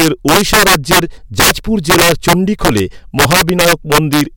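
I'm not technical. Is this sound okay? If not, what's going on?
No. The recording has a fault called integer overflow, and it affects the whole clip. The loudest parts of the speech were pushed past the biggest number the system can store. Instead of being held at that ceiling, those values wrapped around to the opposite extreme. About one in twenty moments are affected, always on the loudest peaks, and they come out harsh and tearing, much sharper than ordinary distortion.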